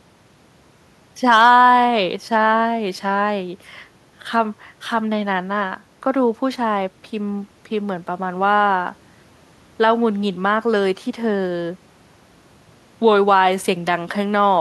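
Listening closely to the speech recording, nothing stood out as a technical fault at any point.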